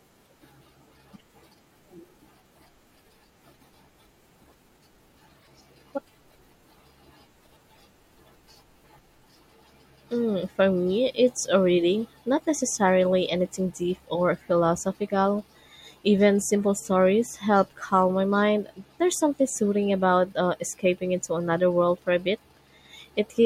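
Speech clip with a short glitch from 5.39 to 5.48 s, likely a broken MP3 bit reservoir: after a cut, roughly three 24 ms frames decode against the wrong borrowed data.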